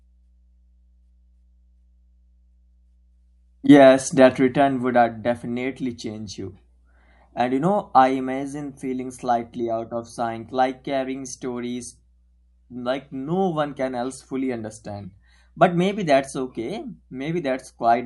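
A steady mains hum sits under this speech recording from start to finish, a low 60 Hz tone roughly 35 dB below the voice level. That points to power-line coupling, from a ground loop in the chain or a transformer close to the cabling.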